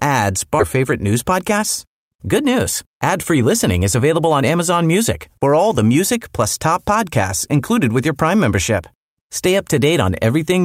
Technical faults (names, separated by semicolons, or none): skip ahead; jitter buffer speed-up